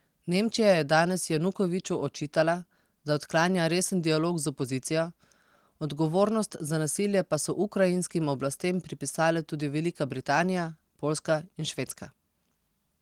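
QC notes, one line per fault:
No faults heard.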